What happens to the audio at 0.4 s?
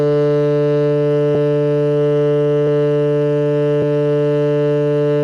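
Nothing goes wrong at 0.4 s: the music plays through that moment intact, with no dropout, click or other fault.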